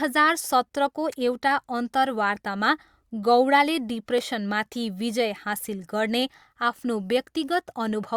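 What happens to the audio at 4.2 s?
A brief click or tiny skip at 4.18 s, right after "अन्तर्वार्तामा गौडाले", from an overlap between stream segments: overlapping time stamps made the player discard a sliver of real, undoubled speech, so the waveform jumps.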